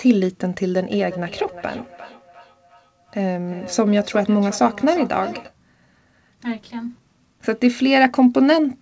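From 0.86 to 5.56 s there is feedback echo between two devices: speech returns at a fixed interval of roughly 400 ms, peaking about 17 dB below the direct sound, each return thinner and more ringing. Unlike room reverberation, the repeats are discrete and evenly spaced.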